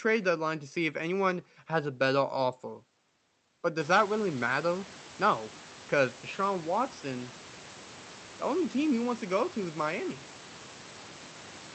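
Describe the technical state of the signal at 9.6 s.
At 9.6 s the signal is intact, with the room's background noise sitting about 21 dB below the speech and the call codec's band-limited coding passing the sound as it normally would.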